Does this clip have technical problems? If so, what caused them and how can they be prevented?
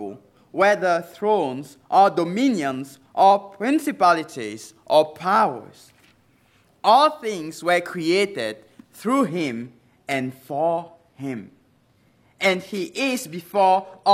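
Yes. From 9.24 s to the end, an adaptive stream at a lower bitrate takes over abruptly, with no gap. Codec artefacts rise, which fits a slowed connection forcing a drop from 96 kbit/s AAC-LC to 24 kbit/s HE-AAC. A spectrogram shows the upper band suddenly becoming smeared, copied-looking texture, while the waveform runs on unbroken. To prevent it, give the player enough bandwidth and buffer, or lock playback to the higher-bitrate rendition.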